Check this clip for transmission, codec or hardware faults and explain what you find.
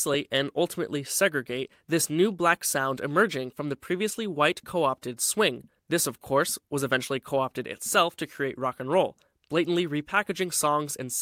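Nothing here points to a technical fault. The speech comes through with no audible disturbance from the path that carried it.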